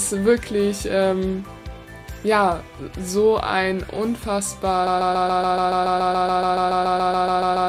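A broken-record loop begins at 4.87 s and runs to the end of the clip. A fragment about 0.14 s long repeats exactly, back to back, roughly twenty times, producing a rapid mechanical stutter with no forward progress. The likely cause is a stall in the player, encoder or stream that kept resending the last piece of audio it held, so whatever sound belonged in those final seconds never arrives.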